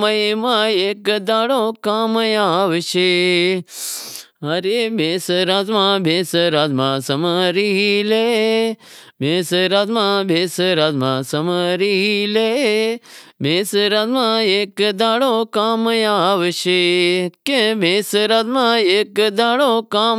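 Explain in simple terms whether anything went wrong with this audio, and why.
Nothing went wrong here: the recorded signal stays steady and intact throughout, with no technical problem to be heard at any point.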